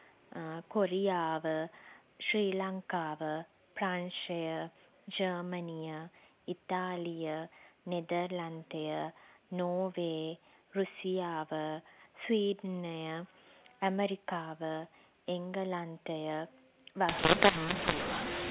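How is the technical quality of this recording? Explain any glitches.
Telephone-band speech carries through most of the recording, with G.711 coding audible as the cut above 4 kHz, until a fault at the end. From 17.09 s to the close at about 18.5 s, mu-law and A-law are mixed up: the A-law bytes are decoded as mu-law, scrambling the logarithmic level mapping. Speech turns harsh and grainy, and quiet gaps fill with hiss. Unlike clipping, the distortion persists even at low levels.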